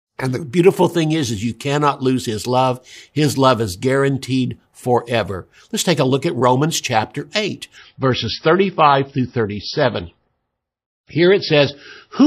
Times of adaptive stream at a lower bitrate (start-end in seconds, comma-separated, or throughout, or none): 7.77-12.27